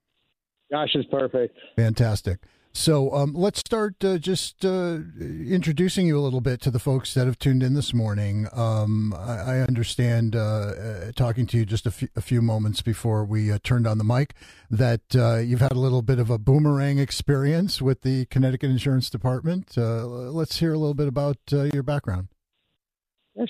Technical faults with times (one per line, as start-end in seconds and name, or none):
3.61-3.66 gap at a join of encoded pieces
9.66-9.68 gap at a join of encoded pieces
15.68-15.71 gap at a join of encoded pieces
21.71-21.73 gap at a join of encoded pieces